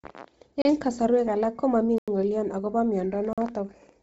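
Throughout the speech, nothing reaches above 7.7 kHz, and the upper band that remains sounds breathy and grainy rather than simply dull. That points to Bluetooth LC3 compression at a low rate, around 24 kbps with 7.5 ms frames, likely zeroing high bands and refilling them with noise, unlike a clean low-pass filter.

Blocks of digital silence fall at 0.62–0.65 s (about 33 ms), at 1.98–2.08 s just after "alak ko mami" (about 93 ms, which fits a 4096-sample buffer), and at 3.33–3.38 s (about 46 ms). Each block cuts out and back in abruptly instead of fading, and the hole is plain silence with no concealment noise.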